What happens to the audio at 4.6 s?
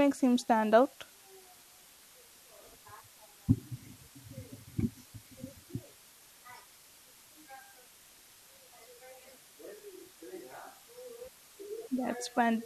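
The speech has been reduced to what sounds like 8-bit resolution with dither applied before rounding, which continues through the whole clip, including 4.6 s. The rounding error is spread into steady white noise, heard as a constant, even hiss roughly 25 dB below the speech, with no gritty distortion.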